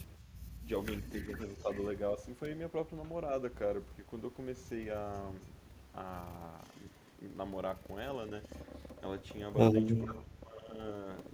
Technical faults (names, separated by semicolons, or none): speech suppressed in double talk; echo leak